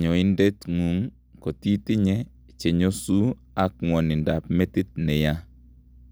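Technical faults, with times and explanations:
No technical faults detected.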